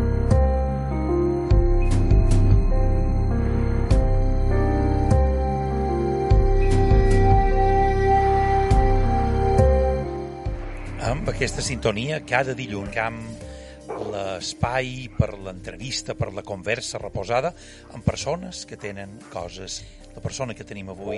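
Whole compressed frames were dropped during playback, either missing from the file or rejected by the decoder as damaged, so this audio has compressed frames skipped at 9.03, 10.01, 12.89 and 19.76 s. Each time, the sound jumps forward, by about 0.3 s at the first two and about 0.7 s at the last two. That points to runs of roughly seven and fifteen frames of 46.4 ms each.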